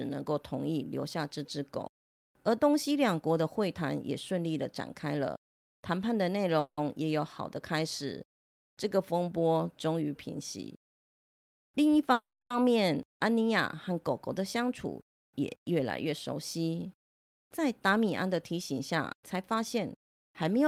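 A call audio freeze runs from 6.59 to 6.79 s. It was likely caused by packets stalling in transit and the jitter buffer running dry. The receiver stretches the last sound into a fading buzz for 180 ms, with only about 10 ms of silence at the end. The speech then resumes where it stopped, so nothing is lost, but it now runs 180 ms later.

A jitter buffer speed-up follows from 11.13 to 12.12 s. Too much audio had built up, so the receiver trims tiny pitch-period slices again and again. That removes roughly a tenth of a second. The speech plays at 110% speed with unchanged pitch and sounds hurried.

A second call audio freeze, from 12.13 to 12.52 s, again likely comes from held-up packets. The 370 ms fill decays into about 260 ms of silence before the speech continues intact, 370 ms later than before.

A milder jitter buffer speed-up, from 15.13 to 16.13 s, runs at 104%. It cuts around 40 ms, and the rush is barely noticeable.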